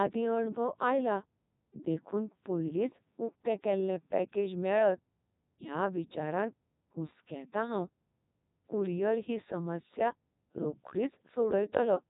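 Codec 2 vocoder damage runs through the whole speech clip, heavy and constant. Instead of keeping the waveform, the decoder rebuilds the voice from sine waves driven by pitch, voicing and spectral envelope, giving a robotic, buzzy tone with nothing above 3.8 kHz. The sound points to Codec 2's 3.2 kbit/s mode.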